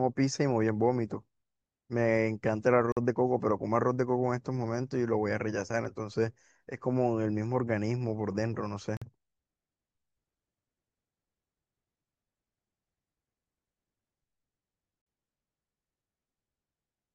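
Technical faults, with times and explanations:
2.92–2.97 s and 8.97–9.02 s, gap between chunks: the speech drops to silence for 48 ms at each join. The audio arrives in 6.0 s chunks with silence left between them, so nothing is lost but the flow breaks.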